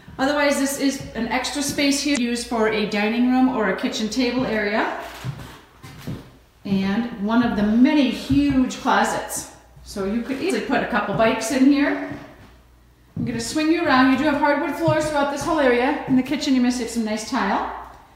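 At 2.13 s and again at 10.47 s, the stream carries damaged data in the compressed stream, each event lasting about 40 ms. Bytes in the encoded file were lost, corrupted or mixed with foreign data, so the decoder misread or rejected those frames and had to resynchronise on a following header. Each event breaks the sound as a brief chirp, click or gap. A spectrogram would show a short vertical disturbance or blank, and the waveform an abrupt discontinuity.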